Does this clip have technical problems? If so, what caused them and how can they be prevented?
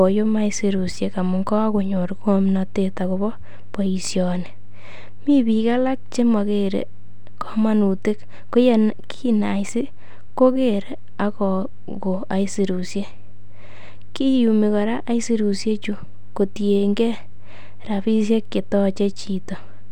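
Yes: mains hum. A ground loop or nearby transformer couples the 50 Hz power line into the signal, adding a steady low tone about 30 dB below the speech throughout. Preventing it means breaking ground loops with balanced cabling or an isolation transformer and keeping audio lines away from power supplies.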